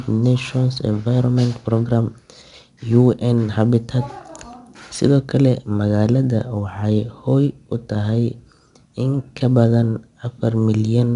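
4-bit ADPCM compression runs through the whole speech clip. Each sample is coded as a coarse 4-bit step from a predicted value, with the step size adapting as it goes. The leftover error is broadband noise that rises and falls with the signal, so a plainly audible gritty hiss rides on the louder speech. Nothing reaches above 10.7 kHz, which points to a reduced sample rate and a data rate near 89 kbps.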